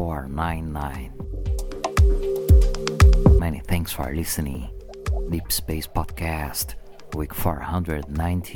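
No technical faults can be heard anywhere in the audio.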